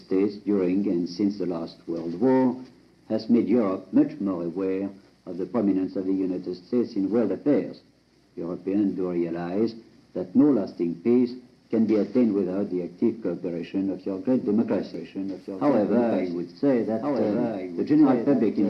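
A doubled audio track appears at 14.94 s and runs to the end. A second copy of the sound enters abruptly and trails the original by about one and a half seconds. It sits roughly 5 dB below the original and is full-band. It has no decay and no room colour, so it is not an echo. The likely cause is a second capture through a slower path, or an edit that left two copies out of step.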